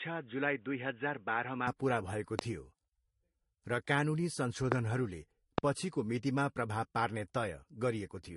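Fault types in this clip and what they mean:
Transcoding between lossy codecs: Nothing survives above 11.2 kHz anywhere in the clip, and the speech carries the smeared texture of two different lossy codecs stacked on each other. The most likely cause is that it was encoded once and then re-encoded at an even lower rate, something like MP3 at around 53 kbit/s followed by Vorbis at around 35 kbit/s. The second codec wasted bits on the first one's artefacts and added its own.
Input switched to a poorer device: From the start until 1.67 s the sound is boxy and dull, with nothing above 3.8 kHz. It is also a few dB quieter and carries a faint extra background noise sitting well below the speech. Just before "पुरा भएको थियो" the full band suddenly opens up, with no gap at the changeover. That points to the input likely having been switched from a poorer, narrower device to a better one.
Loud pop: There are three single sharp pops, at 2.39–2.41 s (right after "पुरा भएको"), 4.72–4.74 s, and 5.58–5.60 s (just before "पछिको मितिमा"). 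Each one jumps far above the speech, and the last is the strongest, while the talking carries on underneath. They sound like brief voltage spikes, likely from a connector, static discharge or a driver glitch, which the downstream circuitry then shaped into these quick clicks.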